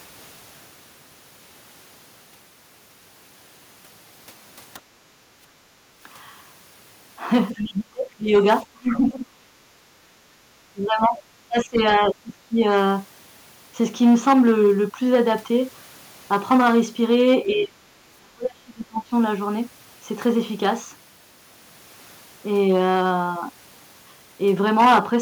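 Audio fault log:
Throughout: hard clipping. Peaks driven about 10 dB past full scale are cut flat on a small share of samples, adding crackle or fuzz on loud syllables.
4.80–5.39 s: background gated by the echo canceller. The room sound sinks by about 7 dB for half a second, then returns.
7.54–8.44, 8.63–9.53, 9.78–9.82, 10.73–12.64, 17.49–17.92, 18.19–19.13 s: speech suppressed in double talk. The talker's own speech drops sharply, by roughly 15 to 35 dB, likely because the echo canceller muted both sides.
7.55–7.62 s: other side's voice leaking through. A brief, faint second voice, far quieter than the talker, slips in, likely unremoved loudspeaker echo, distinct from the talker's own level dips.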